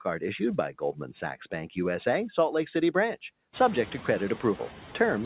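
Speech comes through a narrowband call path, with nothing above 4 kHz, which points to a telephone-grade codec. Noise suppressor artifacts run through the whole clip. The suppressor pulls the steady background down by about 6 dB, band by band and frame by frame. The leftover noise sinks between phrases and pumps under the voice. The room noise climbs by about 18 dB near 3.5 s. From 0.79 to 1.1 s there is speech cut by the noise suppressor. It mistook quiet speech for background and turned it down by up to about 9 dB. Roughly a tenth of a second sounds swallowed and faint.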